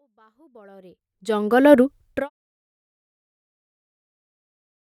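Nothing here counts as a fault: the level rises gently from the very beginning until about 2.15 s, and the fade-out eases down from around 1.5 s to 2.3 s, both smooth, deliberate-sounding changes with no click or hard edge.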